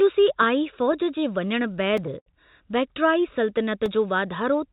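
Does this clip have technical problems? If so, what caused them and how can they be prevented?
Yes. Between 0.92 and 2.28 s the speech suffers repeated stalls (stutter): the audio arrived late or slower than it played, so the jitter buffer kept running dry and the receiver stretched the last sound to cover each wait. Nine such pauses fill about 151 ms in total, the longest about 68 ms, with nothing actually lost. On a spectrogram they appear as smeared, repeated frames and faded tails. A deeper jitter buffer or a steadier network path prevents this.

There are also two blocks of digital silence, at 1.97 s (4 ms) and 3.86 s (about 1 ms), where samples dropped to zero without any fade. Both are heard as clicks or ticks. The waveform shows a near-flat line with abrupt edges, and the spectrogram shows a thin vertical broadband stripe at each edge within the 4 kHz band of the G.711 call path. 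Making sure the output buffer is always filled on time, for example with larger buffers or higher audio-thread priority, prevents these dropouts.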